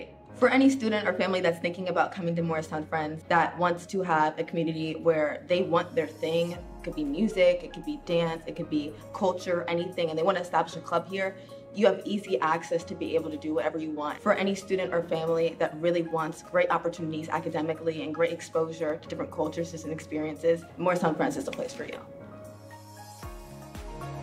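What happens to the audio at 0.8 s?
Nothing goes wrong at 0.8 s; the audio plays through that moment intact, with no dropout, click or distortion.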